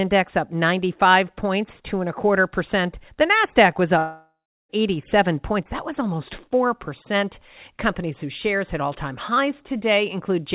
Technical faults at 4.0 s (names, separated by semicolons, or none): long network dropout